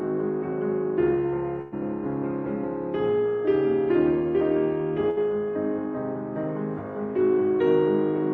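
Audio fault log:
1.61–1.74 s and 5.10–5.18 s: burst of packet loss. Runs of packets were lost, so the receiver held the last music over the gap and let it fade, about 106 ms then 64 ms. Playback then resumes with about 100 ms and 60 ms skipped. On a spectrogram the gaps appear as smeared, decaying horizontal bands, and on a waveform as a shrinking envelope. At 1.61 s it never drops to silence.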